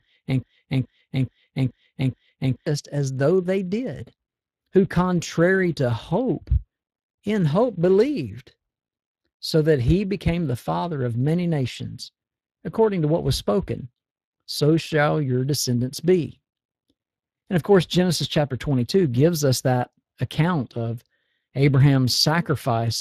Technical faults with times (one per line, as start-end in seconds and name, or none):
0.00-23.01 Speex codec
0.00-2.67 broken-record loop